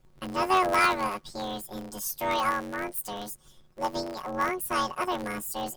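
Planar audio read as interleaved runs throughout the speech. Each 10.88 ms block stores all left samples and then all right samples, but is read as alternating pairs. The blocks are this short, so the result is a robotic buzz at about 92 Hz with no clear octave shift.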